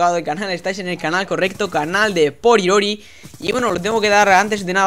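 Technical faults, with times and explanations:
3.47–3.92 s, processor overload crackle: a gritty burst of crackle tears through the sound for about half a second, then stops. The processor kept missing its deadlines, and around ten short buffers, which fits buffers of about 5 ms, dropped to silence with hard edges.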